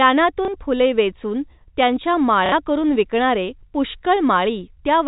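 Packets were lost and the receiver repeated the last good one: at 0.45 s, 30 ms, just before "फुले वेचून त्यांच्या", then at 2.46 s, 60 ms, between "फुले वेचून त्यांच्या" and "करुन विकणारे". The first, a single repeat, gives a small blip, and the second, two packets, a brief robotic stutter, over G.711 telephone-band speech.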